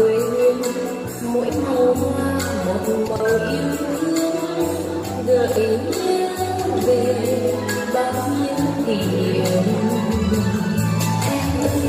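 At 3.08 to 3.2 s and again at 5.48 to 5.56 s, chunks play out of order. A 40 ms block arrives two places late, then one place late, so the sound jumbles, with three hard joins each time. Unlike a dropout, nothing goes missing.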